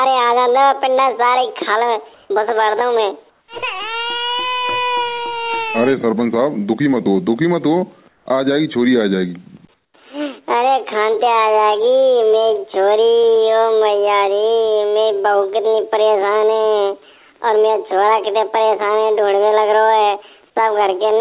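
Four short stretches of the background, at 2.14 to 2.3 s, 3.3 to 3.48 s, 8.08 to 8.26 s and 9.74 to 9.94 s, turn into a flat, featureless hiss. That's likely comfort noise in place of the background: the sender stopped transmitting during quiet moments and the receiver filled in synthetic noise roughly matched to the real floor, which sits about 40 dB under the loud parts. The level changes too: up about 3 dB in the first gap, then down about 1, 5 and 12 dB. Everything is also band-limited to 4 kHz, which fits a G.711 call path.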